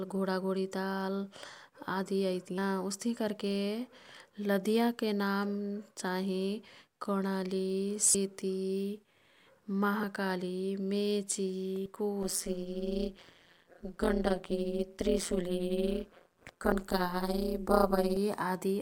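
Compressed frames skipped at 2.58, 8.14, 10.03, 11.86 and 16.72 s break up this speech recording: each time the audio leaps forward by roughly 70 to 150 ms, two to four frames' worth, with jumps in steps that fit a 32 ms frame. Overlap-add ripple runs from 12.23 to 18.17 s. The reassembled frames' overlap fails to sum to constant gain, so level pumps by about 60 dB once per frame, around 150 times a second, producing a metallic buzz with extra tones around each note.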